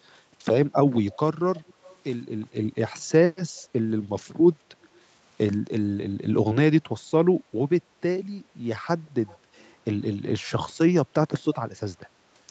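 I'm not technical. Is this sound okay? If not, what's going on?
No. Speech suppressed in double talk at 0.69–1.32, 2.26–4.65, 6.17–7.51 and 8.43–10.23 s: the voice briefly dips or drops out, likely because the call's echo canceller turned this side's voice down along with the loudspeaker echo while both sides talked.

Echo leak at 1.11–1.97, 3.57–3.62 and 9.06–9.71 s: a faint copy of the voice follows about 0.18 s late, likely loudspeaker sound the echo canceller failed to remove.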